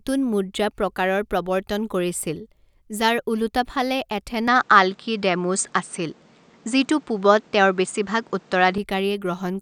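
At 4.48 s the speech abruptly loses everything above 9 kHz, with no gap at the join, shifts in level by about 5 dB and gains a faint new background noise. The input was likely switched to a poorer device; full bandwidth returns at 8.78 s.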